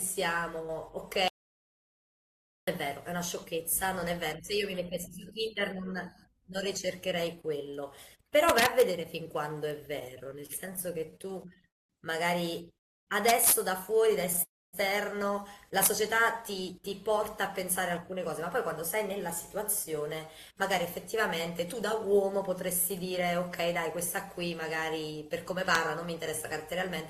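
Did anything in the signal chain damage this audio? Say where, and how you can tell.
Yes. The speech goes dead from 1.28 s to 2.68 s, about 1.4 s of silence with no room tone beneath it, and resumes mid-flow. That is an audio dropout to silence, and the likely cause is at the input, in a disconnected device, broken link or mute, upstream of the recorder or encoder, which kept writing silence. Whatever was spoken in that span is lost, not delayed.

Harsh, splintering cracks land on loud moments at 8.49–8.82 s, 13.29–13.52 s, 15.83–15.87 s and 25.75 s. They are far sharper than ordinary clipping. This is integer overflow in a sample-format or gain stage. Peaks driven roughly 1 to 6 dB past full scale, worst at 13.3 s, wrapped around to the opposite extreme when they should have been limited, so each excess peak flips across the full range.

From 9.99 s to 11.66 s the speech hitches and drags in rapid little catches, about 30 of them, none longer than 27 ms, padding roughly 20% of that stretch (325 ms in all) with continued sound. 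These are repeated stalls (stutter) in call processing. Packets kept arriving late, the jitter buffer repeatedly ran dry, and the receiver stretched the last audio each time. Nothing is actually missing.

Three longer halts follow: 11.68–11.91 s (215 ms), 12.78–13.09 s (292 ms) and 14.43–14.75 s (297 ms). In each, the sound trails off into near-silence, then picks up exactly where it stopped. This is a call audio freeze, likely caused by packets held up on the network so the jitter buffer emptied. The gaps push the delay later without losing any speech.

From 16.39 s to 25.26 s the speech runs slightly fast, about 104% of normal pace, while the pitch stays put. That is a jitter buffer speed-up. After the backlog from the earlier delays arrived, the receiver trimmed its excess by cutting many tiny pitch-period slices, about a third of a second in total, to bring latency back down to its target.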